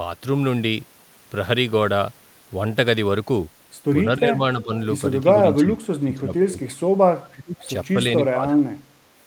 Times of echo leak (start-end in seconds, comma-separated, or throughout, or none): 7.60-7.64